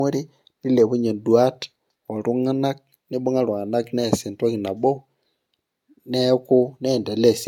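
Generation loss runs through the whole clip. The speech sounds watery and hollow, and consonant onsets are soft. Nothing is heard above 17.9 kHz, which fits AAC-LC near 96 kbit/s. Each pass likely re-quantised on a shifted frame grid, about three in all.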